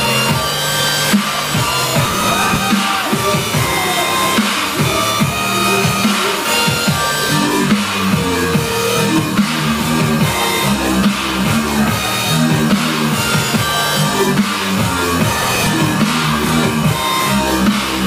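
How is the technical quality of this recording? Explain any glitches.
One glitch stands out: a stretch of processor overload crackle from 2.05 to 2.56 s. Over that half second the processor kept missing its deadlines on very short buffers of a few milliseconds, and dozens of them were skipped outright, leaving tiny hard-edged gaps that merge into a gritty tearing riding on the sound. What separates it from a single dropout is this rapid cluster of cuts, which ends once the load passes.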